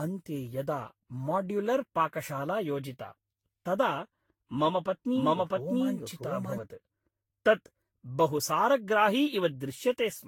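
From the start, the speech sounds swirly, smeared and hollow, with blurred attacks and nothing above 19.2 kHz. This is generation loss. It likely comes from around ten Vorbis re-encodes near 66 kbit/s. Each pass adds fresh quantisation noise and spectral holes.

From 4.66 s to 6.58 s, a doubled audio track appears. A second full-band copy, about as loud as the original, trails it by roughly 0.7 s. It has no room colour and starts and stops abruptly. A slower second capture path is the likely cause.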